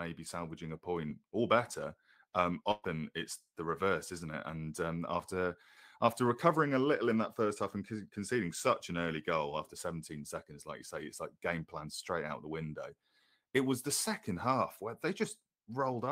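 At 2.71 s the speech breaks up in a burst of packet loss lasting until 2.86 s. About 120 ms of audio was lost. The receiver stretched the last sound across the gap, fading it. Speech then resumes with that stretch missing.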